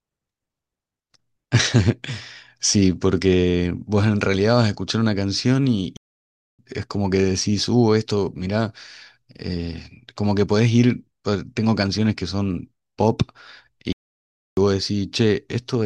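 At 5.97 s the speech cuts out dead for about 620 ms, then picks up again at 6.59 s; the same thing happens from 13.93 to 14.57 s, about 650 ms. Both are playback stalls, likely the player starving for data before resuming.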